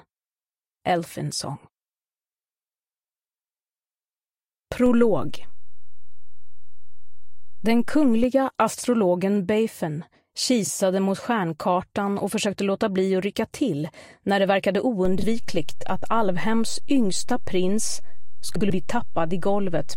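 At 4.86 s a low thump, and another at 8.24 s, mark a DC step: the waveform's zero line jumps to an offset, holds, then steps back, while the sound carries on unchanged. Brief garbled flutters at 8.73 to 8.84 s and 10.64 to 10.70 s come from frames out of order, where two adjacent blocks of about 46.4 ms and 23.2 ms play swapped, with no time lost. At 15.05 s a second DC step thumps in and holds to the end. Within it, further swapped-frame flutters occur at 15.19 to 15.24 s, with blocks of about 13.1 ms, and at 18.56 to 18.70 s, the longest, with blocks of about 82.7 ms.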